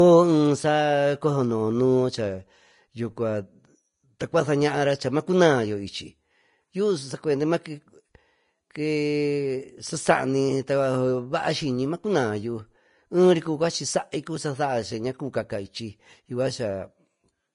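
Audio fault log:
Throughout, Vorbis compression: the speech sounds hissy and grainy, with a dull top end where nothing survives above 10.5 kHz. Consonants lose their crispness, and sibilants turn into a rough, noisy wash instead of clean detail. The damage is plainly audible and fits a low bitrate of around 33 kbps. The likely cause is a Vorbis encode at low quality: the encoder lowers its cut-off and quantises the remaining treble so coarsely that fine spectral detail is replaced by noise of similar energy.
4.19 s, pre-echo: a brief hiss, about 10 ms long, leads into a sharp onset in the speech, and the attack sounds softened and smeared. A transform codec spreads its quantisation noise evenly across each block. Here a sudden loud onset sits late in a block, so noise sized for the loud part also covers the quiet instant just before it. That puts an audible smear ahead of the attack.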